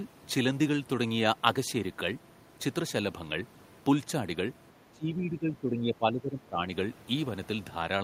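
From 4.91 s to 6.65 s, the speech sinks in level in uneven stretches, adding up to about a second and a half and dropping by around 15 dB at its deepest, so parts of the talker seem to fade behind a barrier and then return. This is speech suppressed in double talk, likely caused by both ends talking at once while the echo canceller, unable to tell this talker from the returning loudspeaker echo, turned the outgoing signal down.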